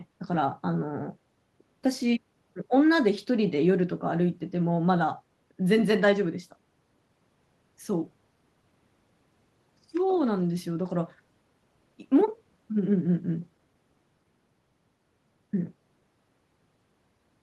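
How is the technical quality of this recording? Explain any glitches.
No glitches can be heard.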